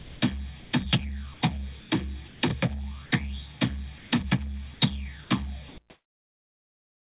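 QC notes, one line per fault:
0.00–0.72 s, sound chopped by the voice detector: the sound breaks into holes filled with steady synthetic noise, about 340 ms in all, likely from voice-activity switching on the sending side.
1.34–2.42 s, sound chopped by the voice detector: repeated gaps swap the sound for comfort noise, about 320 ms in all, likely caused by the detector toggling transmission on and off.
3.06–3.12 s and 3.98–4.12 s, sound dropped by the voice detector: 60 ms and then 140 ms of sound give way to steady noise, likely because the detector treated it as background and stopped sending.
4.74–7.2 s, sound chopped by the voice detector: about 1.52 s in total is lost to comfort-noise holes, likely from repeated detector cutoffs, over a call path with nothing above 4 kHz.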